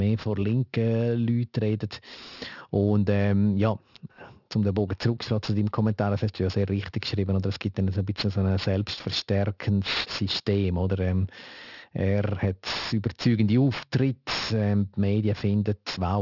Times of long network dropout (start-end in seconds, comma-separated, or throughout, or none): none